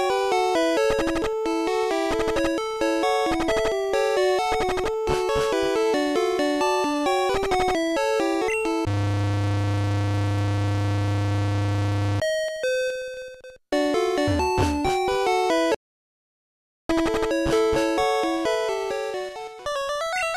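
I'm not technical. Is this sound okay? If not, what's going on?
No. From 15.75 to 16.89 seconds the sound suddenly cuts to total silence, with no background hiss at all, then returns mid-flow. This is an audio dropout to silence, likely caused by the input briefly disconnecting or muting, so that second of sound is lost.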